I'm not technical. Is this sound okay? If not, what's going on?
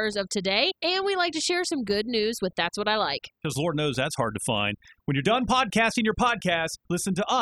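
No, it isn't quite okay. All the way through this speech clip there's overdone noise removal. A noise-cleaning tool was turned up too far, so it shuts off small slices of the sound whenever they look like hiss, and it takes the softer parts of the voice along with them. That's why the background between phrases drops away and breaks up into little twinkly specks.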